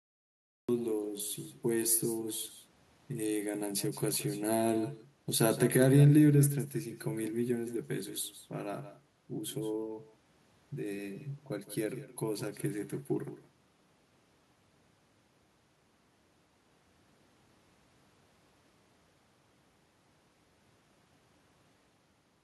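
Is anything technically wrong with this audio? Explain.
Yes, there are two faults. A cut-off start: digital silence runs until 0.69 s, then speech bursts in mid-sound with no attack, unlike a gate, which would still let the onset through. Throughout, there is an echo with no canceller: the far end's loudspeaker leaks into its microphone, returning a thin copy about 14 dB down, roughly 0.15 s late. It is a discrete repeat, not diffuse reverb.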